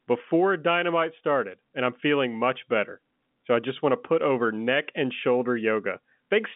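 No technical faults can be heard anywhere in the speech. It comes over a working G.711 telephone path, with the sound held to a line band of roughly 150 Hz to 3.6 kHz and nothing above 3.8 kHz.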